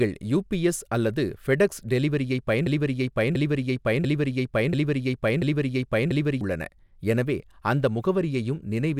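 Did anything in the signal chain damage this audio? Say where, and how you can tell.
Yes. From 2.66 s to 6.41 s, just after "யுபிஎஸ் அல்லது ஃபெடெக்ஸ் டெலிவரியைப்", a broken-record loop replays one 688.6 ms fragment five times back to back before the sound resumes at "உள்ளன எனவே அந்த". The likely culprit is a stalled player or stream buffer that kept resending its last held block, so the audio due in that stretch is gone. On a spectrogram the same pattern tiles repeatedly, and the waveform shows identical segments with abrupt joins.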